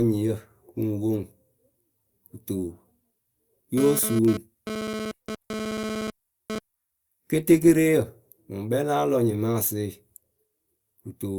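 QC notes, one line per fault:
3.78–6.59 s, GSM phone buzz. A hard, raspy buzz sits under the speech for nearly three seconds. Its fundamental is 217 Hz, with a dense stack of harmonics above it. It runs at about 8 dB below the speech, so it is clearly audible. The buzz comes and goes in this span, as when a nearby 2G phone sends data. The audio circuit rectifies the phone's radio bursts, which arrive 217 times a second, and turns them into sound.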